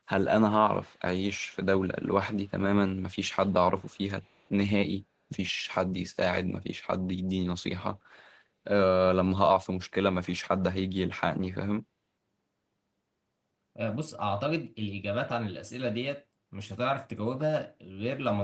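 At 0.82 to 0.99 s and again at 4.22 to 4.5 s, a very faint copy of the speech returns 214 ms behind it. This is echo leak, likely from a loudspeaker-side echo canceller letting residual microphone pickup back into the call.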